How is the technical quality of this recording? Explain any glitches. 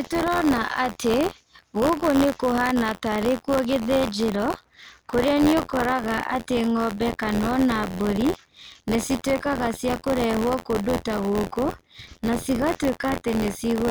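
The recording has a steady mechanical fault running from start to finish. Buffer tearing is present throughout. The speech carries a robotic buzz at about 86 Hz that sits under every syllable and drops out in the gaps. The writing side and the playback hardware have drifted so they collide inside every buffer, which fits a 512-sample buffer. Each time, a small slice, a few percent of the buffer, gets audio from roughly 40 ms earlier, with hard joins on both sides. Those repeated splices at the buffer rate produce the rattle.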